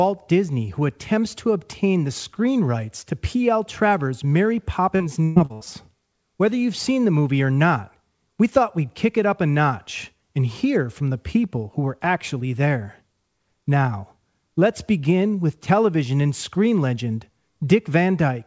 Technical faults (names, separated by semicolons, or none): repeated packet loss (robotic sound)